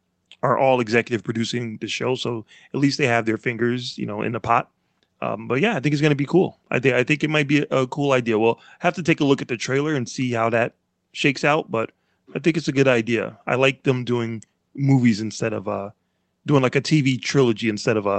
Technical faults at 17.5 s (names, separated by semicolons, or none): none